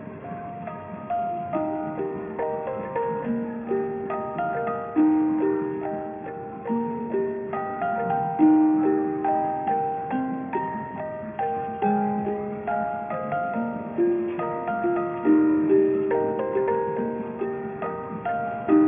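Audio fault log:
Throughout, aliasing: the audio appears to have been resampled from 44.1 kHz down to 6 kHz with no anti-alias filter, so content above 3 kHz folds back as unrelated, gritty tones roughly 25 dB below the signal, with energy running hard to the band edge.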